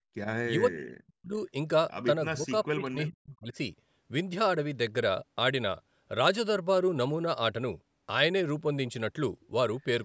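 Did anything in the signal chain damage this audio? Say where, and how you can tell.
Yes, in the call processing. The speech gets pushed way down, around 40 dB at its deepest, at 0 to 0.1 s, 0.59 to 1.35 s and 2.32 to 3.54 s. That's likely speech suppressed in double talk: the echo canceller couldn't separate talker from echo, so it ducked both.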